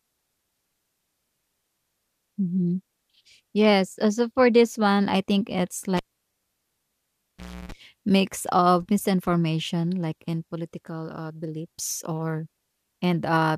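A live cable was pulled out and plugged in again at 5.97 s, right after "one I think it's". The signal path broke with a pop and dropped to near silence for about 1.7 s. As the plug went back in, only its tip made contact at first, so roughly 310 ms of 60 Hz mains buzz came through before a second pop at 7.72 s restored the speech at "mix of".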